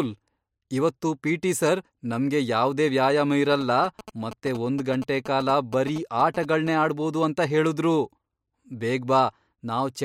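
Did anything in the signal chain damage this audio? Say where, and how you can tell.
Yes. GSM signalling bursts from 3.52 to 6.69 s, ending before "ಆಡ್ಬೋದು ಅಂತ ಹೇಳುದ್ರು": the analogue wiring rectifies a nearby phone's radio bursts into galloping 217 Hz buzzes, about 15 dB below the speech.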